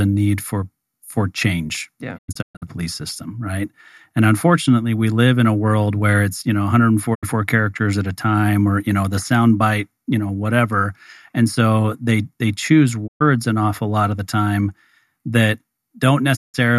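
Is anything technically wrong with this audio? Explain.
Yes, there are four digital broadcast dropouts in this speech. The receiver lost valid frames and muted, with about 20 ms fades, until clean ones returned. The first, at 2.17 to 2.64 s between "change yeah" and "police system right and", breaks into several holes totalling 288 ms. The others fall at 7.13 to 7.25 s after "where it's you know", at 13.06 to 13.22 s after "so they they choose", and at 16.35 to 16.56 s. Each silences the audio outright rather than filling the gap with noise, hiss or repeated sound, which sets it apart from analogue fading or concealment.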